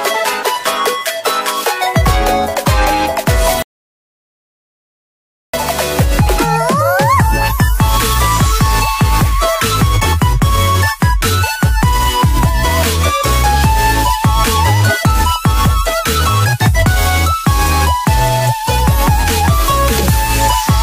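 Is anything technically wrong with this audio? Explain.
Yes. From 3.62 to 5.54 s there is a rebuffering stall: playback drained its downloaded audio and halted until more data arrived. The sound drops to silence for about 1.9 s, then resumes exactly where it stopped, with nothing skipped, only time added.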